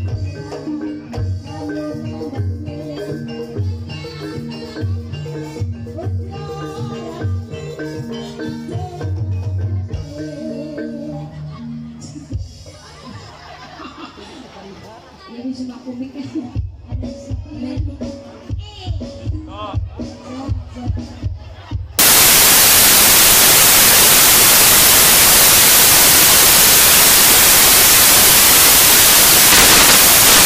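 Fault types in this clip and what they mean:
Samples built from the wrong bytes: From 21.99 s to the end, misassembled sample bytes turn fast-changing low bits into dominant values. Loud, harsh broadband noise results.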